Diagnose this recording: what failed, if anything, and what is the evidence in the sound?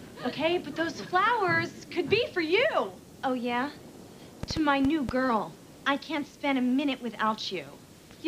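A brief train of clicks ticks over the sound from 4.43 to 5.10 s: about five near-identical pops, irregularly spaced at roughly six per second, peaking around 10 dB above the programme. Likely cause is interference coupling into the analogue wiring, or a struggling interface injecting repeated pulses.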